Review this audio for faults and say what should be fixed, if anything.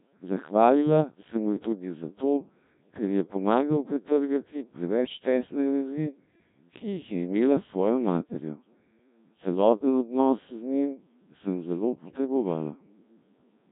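The speech runs through the Codec 2 vocoder throughout. It transmits only pitch, voicing, energy and spectral envelope, then rebuilds everything from sine waves, so the result sounds heavily robotic and buzzy, consistent with the 1.3 kbit/s mode.

Bit errors on digital voice radio corrupt the stream from 12.04 to 12.18 s, just after "njim sem zelo". At around one bit in ten flipped, the pitch, level and tone jump into a brief warbling bleep, which fits a couple of damaged frames.

To prevent this, use a higher-rate codec and keep the link well inside coverage or add stronger error protection.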